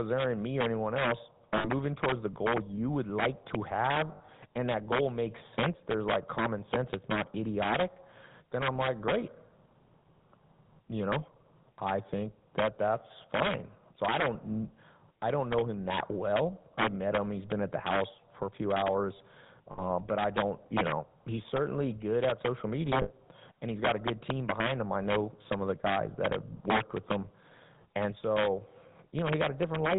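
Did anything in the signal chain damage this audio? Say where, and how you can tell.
Yes. Three kinds of damage are audible.

Integer overflow sits at a gain or sample-format conversion stage. The loudest peaks, about 5 dB past the limit, wrap to the opposite sign instead of being held, giving sharp cracks on a small share of samples. Clipping would flatten those peaks and sound duller.

The GSM full-rate codec, at 13 kbps, runs through the whole clip. The speech is confined to roughly 150 Hz to 3.7 kHz and carries a plainly audible buzzy, gravelly roughness from the pulse-driven vocal-tract model. Simple band-limiting would sound muffled without that grain.

Lost GSM frames, on the network or radio link, appear at 1.58–1.69 s and 19.72–19.87 s (each about 60 ms, fitting three 20 ms frames), 4.12–4.29 s (100 ms scattered over 160 ms, longest run about 70 ms), and 23.02–23.12 s (80 ms). 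In each gap the last good frame repeats as a rough metallic ring, not a silent dropout.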